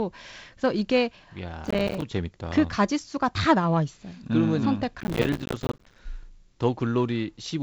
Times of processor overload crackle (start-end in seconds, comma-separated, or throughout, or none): 1.65-2.02, 5.00-5.99